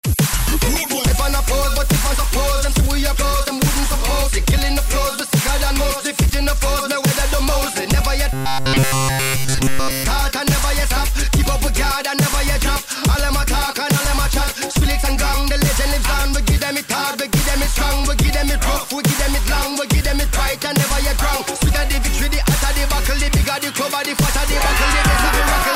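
Robotic sound from repeated short buffers appears from 8.33 to 10.06 s. Over that stretch the audio becomes a rigid, metallic buzz pitched at 133 Hz. The buzz still loosely tracks the shape of the underlying sound. Essentially all of that span is repeated material rather than fresh audio. The likely cause is new data arriving too slowly, so playback loops a fragment of about 7.5 ms and skips the real signal.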